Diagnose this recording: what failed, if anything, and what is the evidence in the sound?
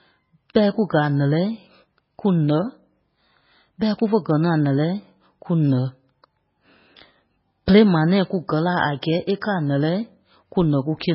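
Codec stage, likely heavy MP3 compression throughout: the speech sounds watery, and the spectrogram is cut flat at 5.6 kHz with flickering gaps where starved bits zero weak lines, fitting a 16 kbps rate.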